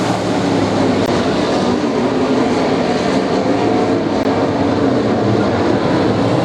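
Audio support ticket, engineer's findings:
Two brief dropouts to silence, at 1.06 s and 4.23 s. Each gap about 17 ms. Playback resumes after each. Probable component: Bluetooth link to the headphones. Mechanism: likely a Bluetooth stall. Packets held up by interference, headphone buffer runs empty, output goes silent until retransmitted packets arrive. Same signature both times.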